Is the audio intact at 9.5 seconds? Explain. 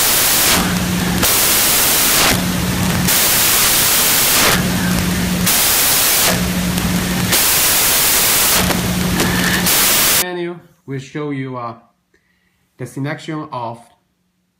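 No. At 9.5 seconds the audio is still inside a stretch of samples built from the wrong bytes, running from 0.0 to 10.22 s. The reader is assembling each sample from mismatched bytes, so the rapidly changing low-order bits end up as the loudest part of every value. The result is loud, harsh broadband noise, close to white on loud passages. That dependence on the original signal sets it apart from added background hiss, which stays constant regardless of content.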